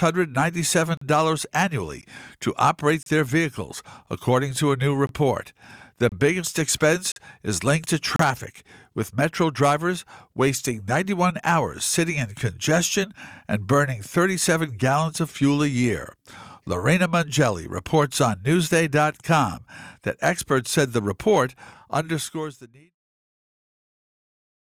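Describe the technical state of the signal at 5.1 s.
At 5.1 s the audio shows a gap between stream segments. The time stamps of two consecutive pieces of the stream, which appear to be about one second long, leave a small hole between them, and the player fills that interval with silence instead of audio. The result is a brief dropout from 5.07 to 5.09 s, about 21 ms long, with abrupt edges that cut the speech off and bring it straight back. No audio content is actually missing.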